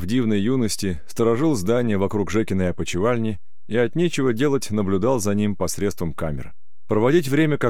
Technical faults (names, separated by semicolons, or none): DC offset